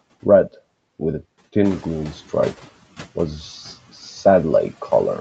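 Noise suppressor artifacts run through the whole clip. The suppressor pulls down bands it judges to be steady noise, by about 12 dB. The background dips in the gaps and swells under the speech.

Around 1.5 s the room noise jumps by about 13 dB. At 1.64 s, just after "with a", the noise suppressor is catching up. Its noise estimate lags, so the louder noise passes with only about 9 dB of reduction. It sinks over about 1.06 s, settling by 2.7 s, before "was the".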